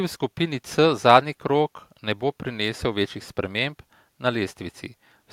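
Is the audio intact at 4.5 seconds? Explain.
Yes, at 4.5 seconds the speech plays through intact, with no dropout, click, distortion or other fault at that point.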